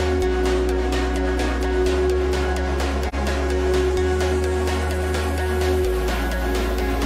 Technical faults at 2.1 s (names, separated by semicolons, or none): none